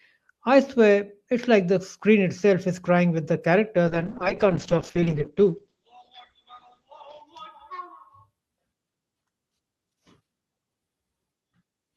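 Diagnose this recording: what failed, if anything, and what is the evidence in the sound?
From 3.88 to 7.33 s the speech turns rough and muffled, top end gone above 8 kHz: a call bitrate drop, the codec starved, consistent with roughly 32 falling to 9 kbps.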